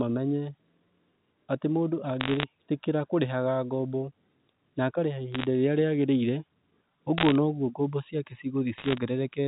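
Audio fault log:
2.2–2.44 s, 5.32–5.45 s, 7.18–7.35 s and 8.78–8.98 s, bit errors on a digital phone line: brief bursts of sharp ticking crackle over the telephone-band speech, because scattered flipped bits, roughly 0.7 to 1 percent of them, each corrupt a single A-law sample.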